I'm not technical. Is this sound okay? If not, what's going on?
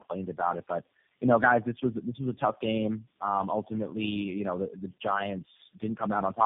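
No. From start to finish the voice sounds rough, muffled and warbly, like a poor phone line, with nothing above 3.6 kHz. This is tandem speech coding. The call passed through four speech-squeezing systems in a row, one after another, ending with G.729A. Each one decoded the speech and packed it again in its own way, working on the previous one's already damaged output, so the damage piled up.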